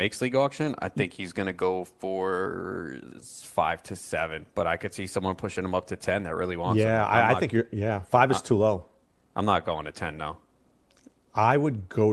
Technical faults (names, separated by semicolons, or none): none